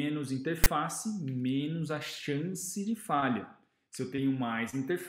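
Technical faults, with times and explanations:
0.64–0.67 s, file tags played as audio: for about 27 ms a block of text tags followed by zero padding is read as sample data. The text bytes come out as a harsh, loud rasp pushed off centre, and the padding drops to dead silence, so the burst starts and stops abruptly. On a waveform this shows as a dense slab offset from the zero line that ends in a flat run; a spectrogram shows a hard-edged broadband stripe, then a blank gap.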